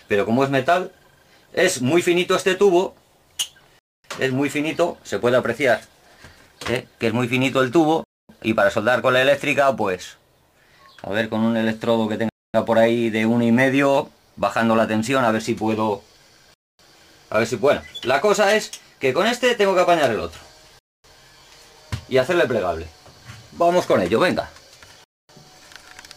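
Silent holes of 0.25 s each begin at 3.79, 8.04, 12.29, 16.54, 20.79 and 25.04 s. This is a gap between chunks: the audio arrives in 4 s blocks, and silence is inserted at each join. No sound is lost, but playback stops abruptly at every boundary.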